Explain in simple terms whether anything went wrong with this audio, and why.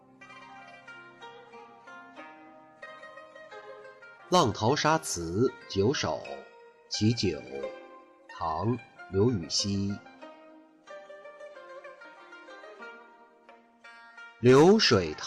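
Between 3.25 and 4.21 seconds the sound picks up a handful of tiny ticks and smeared hiccups, about seven of them, each no longer than roughly 10 ms. These are scattered short gaps: small pieces of the audio stream arrived late or went missing along the way, and the receiving end covered each hole by stretching the sound that came just before it. Together they patch only about a twentieth of a second, so the audio stays clear apart from those brief blemishes.

Right after that, from 4.35 to 5.55 seconds, the audio drags slightly, running at about 94% of normal speed while the pitch stays the same, so sounds come out a little drawn out. This is a jitter buffer slow-down. The receiver keeps a small reserve of incoming audio to ride out delays, and here that reserve was running short. To refill it, the receiver repeated tiny slices of the sound over and over, adding 75 ms in total.

From 7.82 to 8.28 seconds the opposite happens, and the sound briefly hurries along at about 111% of normal speed, again without any change in pitch. 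This is a jitter buffer speed-up. At this point the receiver's reserve had grown larger than it wanted, which adds delay. To trim that back it cut out very short slices of the sound in quick succession, removing around 70 ms, and that makes this half-second rush by.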